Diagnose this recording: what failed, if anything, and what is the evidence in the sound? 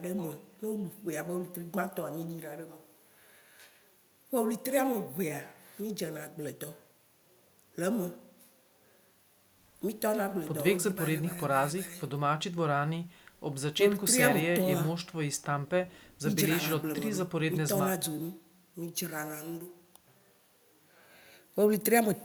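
Nothing failed; the speech shows no audible technical fault.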